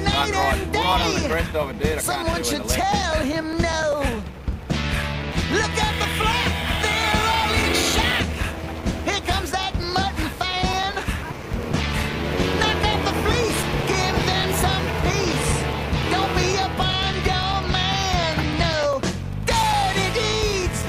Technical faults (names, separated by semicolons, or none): periodic USB or driver dropouts